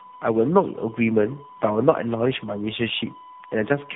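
From the first moment to the end, a steady, fixed-pitch whine sits at 1 kHz, roughly 20 dB below the speech and never shifting in pitch. This is USB whine: the bus's 1 ms frame activity is leaking into the audio through shared power or ground.

Throughout, the speech also sounds rough, muffled and warbly, with nothing above 3.8 kHz. This points to tandem speech coding. The call was decoded and re-encoded at each network boundary, which fits two low-rate speech codecs in series, such as G.729A and later AMR-NB, with a G.711 link between them. The second coder had to work on the first coder's already damaged output, so their artefacts stack.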